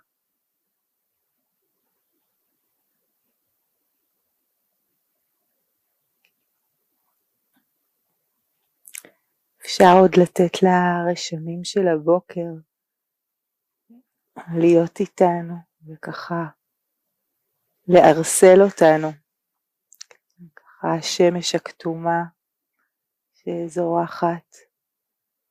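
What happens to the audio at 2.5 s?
Nothing goes wrong at 2.5 s, and the audio plays through that moment intact, with no dropout, click or distortion.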